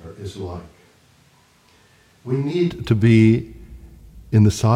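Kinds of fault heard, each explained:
Switch to a distant microphone: The speech is already roomy, hollow and thin in the bass from the start, about 10 dB quieter, with background noise only about 35 dB below the voice, likely because a far microphone stood in for the close one. At 2.68 s, just before "to be", it snaps back to close, full sound. Unlike reverb added in processing, the level, noise and tone all change together and abruptly.
Damaged data in a compressed stream: From 2.47 to 2.53 s, just before "to be", a brief glitch disrupts the sound as the decoder misreads corrupted frames and hunts for the next valid one.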